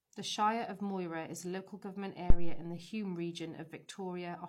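At 2.30 s a phantom power thump breaks into the speech and is gone by 2.69 s. A supply was switched on or off while the input was live, and that sudden voltage step passed through the coupling capacitors as a deep, low thud that dies away over about 87 ms. Unlike a handling bump or plosive, it has no relation to the speech and arrives as a single electrical step with a smooth decay.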